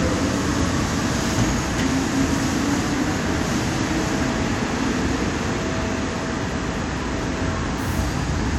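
Frames out of order occur at 3.29 to 3.34 s and again at 6.33 to 6.43 s. Two adjacent blocks of about 23 ms, then about 46 ms, play in swapped order, producing a brief garbled flutter, though no time is lost.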